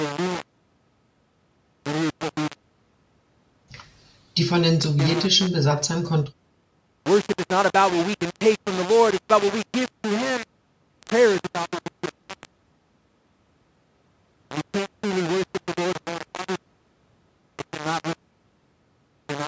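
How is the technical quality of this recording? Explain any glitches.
The recording is heavily degraded by a coarse, grainy distortion that runs through the whole speech clip. The call microphone processing is audible only as a band limit, with nothing above 8 kHz.

Low bit depth without dither is the likely cause, present from start to finish. The grit rides on the speech itself, swelling and shifting as the level changes, and the quietest passages drop out or sputter instead of fading smoothly. It sounds like the signal was rounded to about 4 bits with no dither, so the error tracks the waveform and sits only roughly 10 dB below it.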